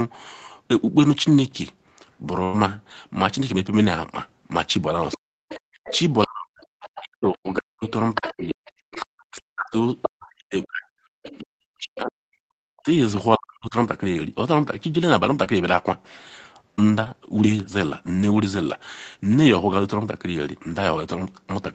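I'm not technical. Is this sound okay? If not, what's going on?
No. At 2.43 to 2.56 s there is a burst of packet loss. About a tenth of a second of speech went missing. The receiver stretched the last sound to cover it, so you hear a brief held buzz or fading hiss. Then the speech jumps ahead.

Near the end of that, at about 2.53 s, one lost packet was rebuilt from error correction. It fills only 20 ms and sounds rougher, not silent.

From 5.11 to 12.12 s, a second, fainter voice comes through in pieces: 5.11 to 6.26 s, 6.81 to 9.05 s, 10.02 to 10.64 s, 11.23 to 11.42 s and 11.95 to 12.12 s. This is the other side's voice leaking through, likely from a loudspeaker the echo canceller didn't fully remove.

Between 5.17 and 13.75 s, the main speech keeps dropping away, sometimes almost to nothing, for about 5 seconds in total. This is speech suppressed in double talk. Likely both sides talked at once and the echo canceller turned everything down.

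From 15.44 to 17.08 s there are scattered short gaps. About three tiny holes, each around 20 ms, were patched over. You may hear small ticks or hiccups.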